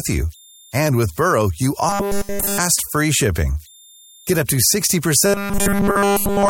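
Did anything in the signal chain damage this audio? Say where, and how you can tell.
Yes. At the converter there are idle tones throughout: a faint whistle around 4 kHz, about 33 dB below the speech, from undithered delta-sigma patterns.

In the driver or buffer stage, robotic sound from repeated short buffers sets in at 1.89–2.59 s, just before "free shipping", and again at 5.26–6.49 s. There's a rigid 200 Hz buzz, likely from a 5 ms chunk replaying with essentially nothing new arriving.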